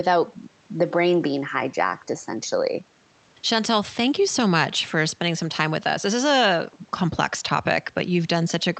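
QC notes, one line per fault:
Nothing to flag on this one, just speech arriving over a call link whose top end stops around 8 kHz, as expected for that kind of connection.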